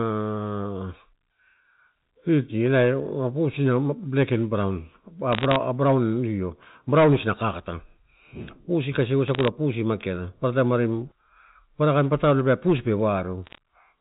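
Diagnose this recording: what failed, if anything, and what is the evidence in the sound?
What failed is the digital transmission path: bit errors on a digital phone line. You get three short bursts of sharp ticks and crackle at 5.33 to 5.56 s, 9.28 to 9.48 s and 13.45 to 13.58 s, sitting on top of speech that's otherwise untouched. Each flipped bit corrupts a single A-law sample, so a hit on the sign or a high-order bit throws out a spike. The density suggests an error rate somewhere around half a percent during the bursts, a bit lower in the middle one. The G.711 coding itself is fine; the band still stops at 4 kHz as it should.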